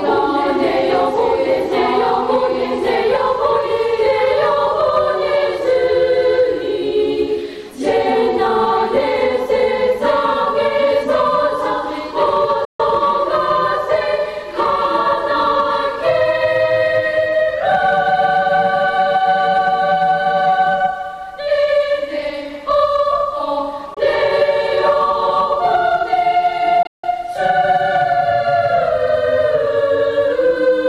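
The sound cuts out at 12.65–12.80 s, 23.94–23.97 s and 26.83–27.04 s, where the last gap is broken up with one stretch of about 160 ms. Each hole is silent and then picks up further along, which points to a likely Bluetooth dropout, with packets lost before reaching the headphones.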